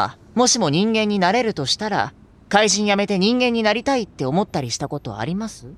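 No technical faults are audible.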